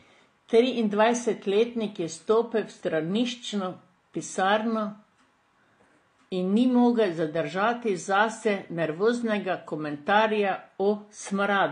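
Transcoding between lossy codecs runs through the whole speech clip: nothing sounds above 9.6 kHz, and two kinds of coding artefact overlap. The likely cause is an HE-AAC encode near 40 kbit/s re-encoded as AAC-LC around 32 kbit/s, the second encoder spending bits on the first one's damage.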